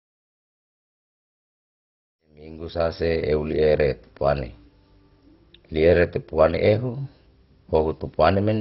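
Speech runs dull and gurgling from start to finish, its sound granular and coarsely stepped, which points to MP2 compression at heavy damage, likely at a low bitrate around 32 kbps. A spectrogram would show nothing above 5.6 kHz and upper bands flickering in and out, while the waveform shows a smooth fade-in from around 2 s that reaches full level at 3.32 s.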